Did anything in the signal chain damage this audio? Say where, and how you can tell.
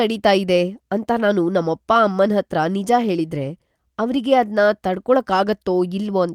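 No, nothing in this speech stood out on listening as damage from any stage of the signal chain.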